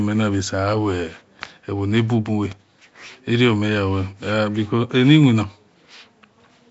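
Nellymoser compression throughout: hissy, smeared, underwater speech with nothing above 7.7 kHz, likely Flash's Nellymoser Asao codec filling bit-starved bands with noise.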